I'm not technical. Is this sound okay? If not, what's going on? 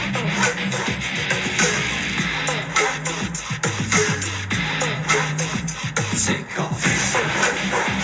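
Yes, nothing stood out as a problem when listening to this sound.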